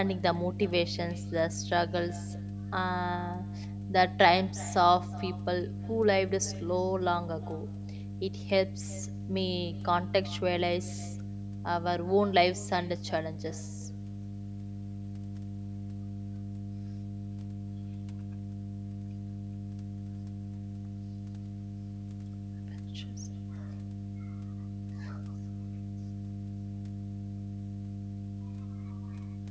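Mains hum runs throughout this speech recording as a steady 50 Hz tone with low harmonics, almost as loud as the talking itself. A ground loop or nearby transformer is coupling the power line into the signal path, laying that drone under everything. Echo with no canceller is also present throughout. Each phrase returns roughly 400 ms later as a fainter, thinner copy about 18 dB below the speech, because the far end's loudspeaker is feeding its microphone and nothing strips that pickup out. The top of the band stops at 8 kHz, from the call's microphone processing.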